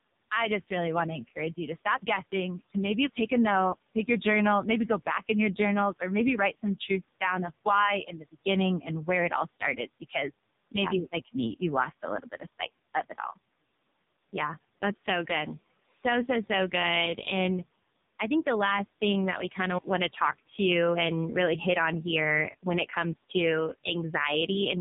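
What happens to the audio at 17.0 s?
At 17.0 s the speech is still carrying the AMR narrowband mobile codec heard across the whole clip: nothing above about 3.8 kHz, and a buzzy, synthetic pulse-driven texture, with the quiet room noise warbling, pointing to heavy coding near 5 kbps rather than plain low-pass filtering.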